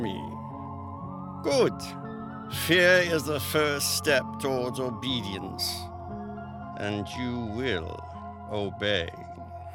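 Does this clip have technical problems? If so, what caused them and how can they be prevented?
Yes. From 6.73 to 9.43 s a Bluetooth SBC bit pool drop dulls the treble and adds gritty quantisation noise, consistent with the bit pool falling from 28 to 13 (about 102 kbps). A clean low-pass would lose treble without that grit. Keeping the Bluetooth link uncongested, with less distance and interference, prevents it.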